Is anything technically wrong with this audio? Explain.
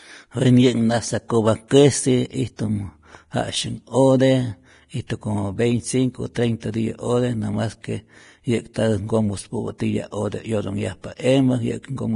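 Yes. Two faults are audible in this speech clip.

Vorbis compression, throughout: the speech sounds hissy and grainy, and nothing is present above 10.5 kHz. This likely comes from heavy low-bitrate Vorbis coding, around 31 kbps. The codec cuts the treble off and quantises the remaining high detail so coarsely that it turns into noise.

Pre-echo, at 1.68–1.71 s, 5.07–5.10 s (just before "como veinticinco"), 6.60–6.62 s (between "como veinticinco" and "tiyä ote namas"), 8.74–8.76 s, and 9.78 s (just before "ote 'yotonhyajpa"). The codec spreads each block's quantisation noise across the whole block, so noise meant for a sharp attack also fills the quiet moment before it. Each onset is preceded by a brief hiss of about 19 to 31 ms and sounds smeared.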